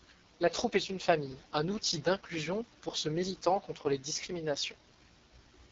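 From start to finish the speech carries the sound of the AMR wideband (HD Voice) codec working at its bottom setting. Nothing is present above 7 kHz, and the top band sounds like shaped noise rather than real detail. The vocal tract model, starved of bits, renders the voice rough and raspy throughout, with heavy coding damage that points to the lowest AMR-WB rate of about 6.6 kbit/s.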